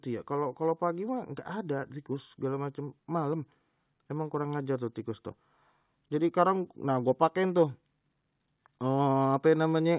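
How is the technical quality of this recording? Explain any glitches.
No glitches are audible in the speech, and the hard top at 4 kHz fits the narrowband coding of an ordinary call path working as intended.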